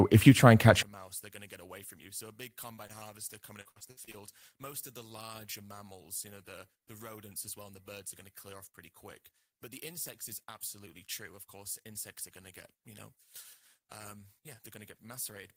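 A speech recording in which, from 0.83 s, just after "you try and catch", to the end, the mono sum collapses by about 26 dB. The centred voice nearly vanishes, leaving a faint residue, likely because one channel is inverted. On a waveform the mono trace shrinks to a sliver. At 2.87 to 2.91 s a short concealed packet loss leaves a brief smear where about 20 ms of sound was rebuilt by continuing the preceding sound. A spectrogram shows a short stretch of smoothed, repeated spectrum with a soft join. From 3.61 to 4.15 s repeated packet loss makes the sound choppy and robotic. About six holes, the longest 60 ms, are patched in turn, so roughly a third of that half-second is synthetic. This shows as stuttering blocks of frozen, copied spectrum.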